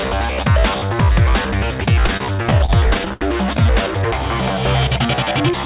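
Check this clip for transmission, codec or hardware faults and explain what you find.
One transmission fault is audible: repeated stalls (stutter) between 2.06 and 3.68 s. Eighteen short gaps occur there, the longest about 74 ms, totalling roughly 0.3 s. Packets arrived late, the jitter buffer repeatedly ran dry, and the receiver stretched the last sound to cover each wait, fading it in the longer ones. Nothing is lost, but the passage drags and stutters. The band limit at 4 kHz fits a narrowband G.711-type call codec.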